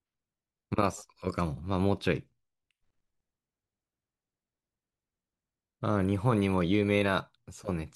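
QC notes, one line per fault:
Nothing stood out on listening to this speech recording.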